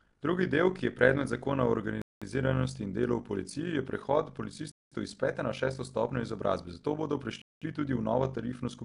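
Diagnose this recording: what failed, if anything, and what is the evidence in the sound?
A fast, rough flutter runs through the whole clip, giving the speech a buzzy, robotic tremolo: the level swells and dips by about 11 dB at a rate of around 50 times a second. This is overlap-add ripple, introduced at a processing stage that cut the audio into windowed frames and rejoined them with an overlap whose windows do not sum to a steady gain, so each frame boundary leaves a dip and each frame centre a peak.

The speech carries a hissy, grainy halo and a smeared, underwater quality throughout, and nothing is present above 10.6 kHz. The likely cause is Nellymoser compression at the codec stage. Nellymoser Asao spends a fixed, small bit budget on each short block, so weaker bands receive no bits and are filled with noise, which produces that rough haze. The damage is plainly audible and fits a bitrate of around 44 kbps.

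Three hard-edged silences of 200 ms cut into the speech at 2.02 s, just after "je predmet zakona o", at 4.72 s, between "v policiji je prehod" and "iz pete na šesto", and at 7.42 s, after "stopnjo izobrazbe zato bodo". They recur every 2.7 s, which fits 2.5 s chunks with a pause inserted at each join. This is a gap between chunks at the storage or playback stage. The audio resumes where it stopped, so nothing is lost, but each join is interrupted.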